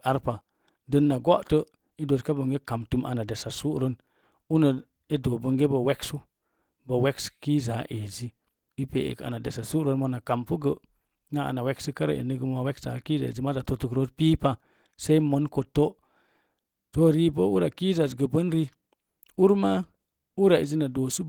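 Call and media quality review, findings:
Clock drift between sender and receiver. Symptom: small hiccups in the speech, at uneven intervals, across the whole call. Component: sender audio clock against receiver playout. Mechanism: sender clock runs around 4 percent fast. Jitter buffer keeps overfilling. Receiver must shed audio to keep up.

Repeated timing corrections, 0.07 s to 21.22 s. Symptom: slight skips in the speech, all in the same direction, unevenly spaced. Component: receiver jitter buffer. Mechanism: short pieces cut to absorb a 104 percent sender rate. Each cut is small.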